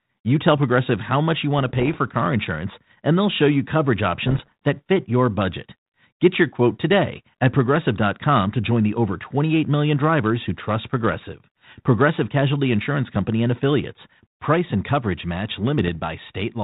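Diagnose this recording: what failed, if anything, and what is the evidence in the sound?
What failed is the ADPCM link itself: bit errors on an ADPCM link, on a telephone-band path whose sound fits 32 kbit/s G.726. You get four rough, poppy bursts with quick level jumps: 1.59–1.97 s, 4.27–4.52 s between "they'll show you coverage" and "that fit your budget", 11.09–11.22 s after "million drivers who trust", and 15.78–15.89 s after "and coverage match". Each flipped bit throws off the decoder's step size and prediction, so a single error smears into a short burst.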